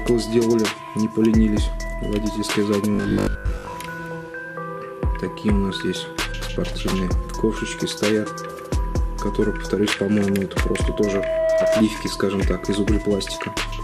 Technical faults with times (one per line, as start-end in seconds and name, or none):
0.00-13.84 MP2 compression
2.95-3.77 robotic sound from repeated short buffers
10.59-11.83 loudspeaker feedback squeal